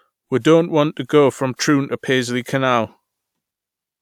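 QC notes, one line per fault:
No faults found in this clip.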